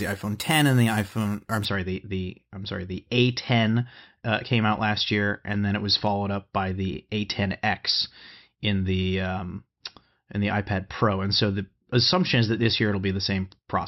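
Imaging from sample-and-hold upsampling affects this speech clip from 0.0 to 1.65 s, ending just before "sorry the the I'm". Each sample of 12 kHz audio was held and repeated up to 48 kHz without smoothing. This places mirrored copies in the 6 to 12 kHz band at about -17 dB, heard as a metallic fizz tracking the speech.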